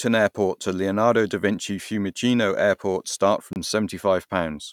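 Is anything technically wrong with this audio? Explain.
Yes. From 3.53 to 3.56 s the speech drops to about 29 ms of silence and then resumes, likely a Bluetooth stall where delayed packets left the headphone buffer empty.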